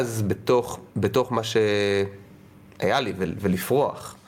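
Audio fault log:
throughout, gain pumping: the input gain was likely set far too high for the microphone, so a fast limiter or compressor clamps down each time the speech gets loud and releases as soon as it falls away. The level swings by around 10 dB as a result, which leaves the speech squashed and flattened in dynamics, soft and loud passages sitting unnaturally close together.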